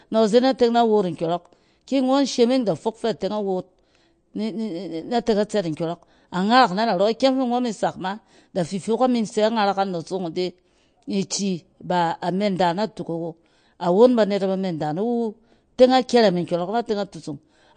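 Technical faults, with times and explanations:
Throughout, MP3 compression: nothing reaches above 9.1 kHz, so the treble stops at a hard ceiling and s sounds lose their air. The damage is plainly audible, a watery, swirling quality where quiet frequency detail flickers in and out from one frame to the next, with smeared consonant onsets. This is likely a starved MP3 encoder, which fits a low bitrate around 48 kbps, trimming the top band and zeroing weak components to save bits.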